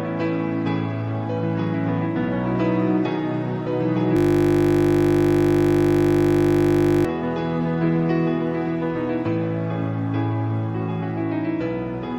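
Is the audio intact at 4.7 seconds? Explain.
No. A system hang loop runs from 4.17 to 7.05 s: the system froze while the audio hardware kept replaying one 20 ms stretch of its buffer, over a hundred times, so 4.7 s sits inside a steady 50 Hz buzz.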